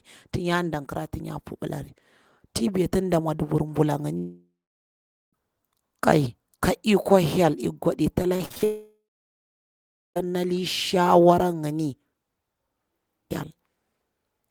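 The speech clip has two long network dropouts, at 4.17–5.35 s and 8.64–10.18 s, likely caused by audio that stopped arriving. Each starts as a fading buzz continuing the last sound, then falls to silence for about 0.83 s and 1.16 s respectively before the speech resumes further on with the gap's content lost. Just before the second dropout, 8.23–8.64 s shows repeated packet loss with a robotic sound: five short holes, the longest 47 ms, patched by extending the preceding audio, so about 43% of that span is concealed and sounds choppy.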